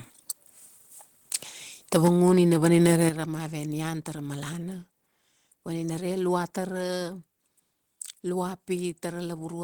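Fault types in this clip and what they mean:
Microphone overload: Peaks at 1.32–1.36 s and again from 2.66 to 3.05 s, just before "ra mave nian tara", get their tops flattened, giving a harsh, crackly edge. The first burst overshoots by about 14 dB, the second by about 5 dB, likely from input gain set too high.
Microphone volume stepped down: The whole signal, voice and background together, drops abruptly in level, by about 4 dB at 2.08 s and then about 8 dB at 3.09 s, right after the distorted stretch. That's likely the call software turning the input down after hearing clipping.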